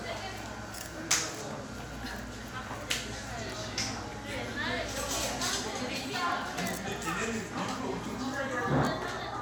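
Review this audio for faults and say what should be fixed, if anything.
Nothing needs fixing: the audio has no audible technical faults.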